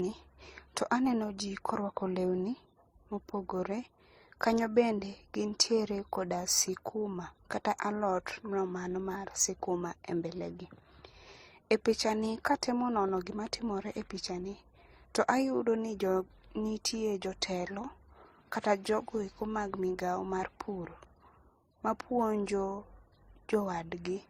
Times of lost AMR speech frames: none

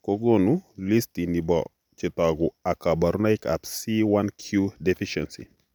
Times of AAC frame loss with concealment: none

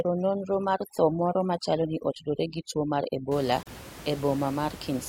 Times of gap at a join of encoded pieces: 3.63-3.67

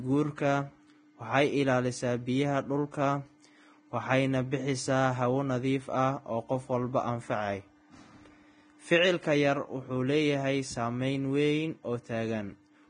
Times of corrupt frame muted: none

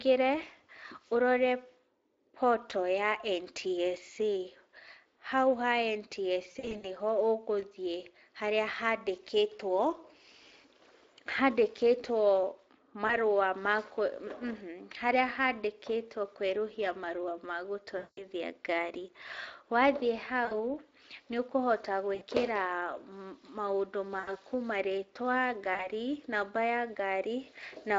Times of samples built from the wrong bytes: none

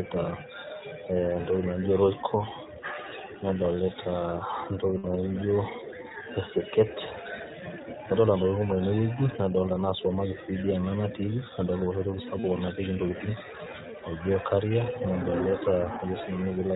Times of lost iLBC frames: 4.98-5.05, 12.40-12.45

